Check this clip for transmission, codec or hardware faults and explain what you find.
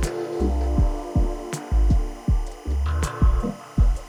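One fault runs through the whole clip: timecode bleed. Linear timecode running at 25 frames per second has leaked from a neighbouring track or cable into the audio path. That code is a square wave flipping between two pitches, roughly 1 kHz and 2 kHz, so a thin chirping warble sits behind the sound from start to finish. It is steady and rhythmic, roughly 30 dB below the main signal.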